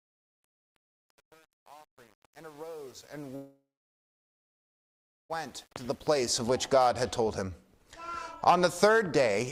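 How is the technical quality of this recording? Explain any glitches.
The recording has two clear faults, both in its first 6.4 seconds: a gritty fade-in and a stall of nearly two seconds.

Truncation distortion on a fade runs from 0.0 to 6.36 s. The fade-in itself rises from near the start to 6.36 s, but the low-level portion, worst from 0.0 to 6.05 s, was rendered with roughly 8-bit resolution and no dither. At those levels the waveform collapses into a few coarse square steps, so the sound comes through grainy instead of emerging cleanly.

A call audio freeze occupies 3.35 to 5.32 s. The audio stops progressing and the gap is filled for about 1.94 s, mostly with silence, around 1.62 s of it, after a brief decaying tail of the last sound. When playback resumes, it continues from where it halted, so nothing is lost, but everything afterward arrives about 1.94 s late. The likely cause is delayed packets draining the receiver's jitter buffer.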